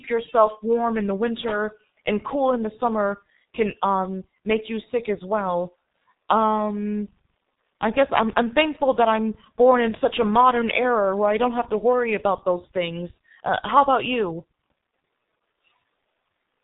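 Throughout, the speech is muffled and hoarse, with smeared consonants and nothing above 3.8 kHz. This is heavy G.723.1 codec damage: coarse frames at a rate fitting about 6.3 kbit/s.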